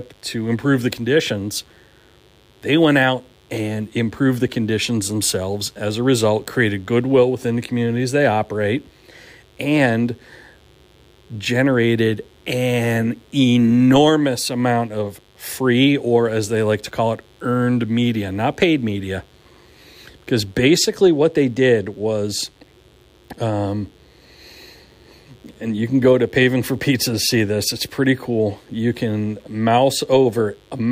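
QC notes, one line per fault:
throughout: mains buzz. A steady, raspy buzz sits under the speech at about 35 dB below it, built on 50 Hz. Sharp switching spikes twice per cycle spread harmonics up into several kHz, drawn on a spectrogram as evenly spaced horizontal lines every 50 Hz.
20.12 to 30.92 s: adaptive stream at a lower bitrate. The stream drops to a cheaper version with no gap, which fits a fall from MP3 at 128 kbit/s to 77 kbit/s. Artefacts rise, and the change in quality is sudden.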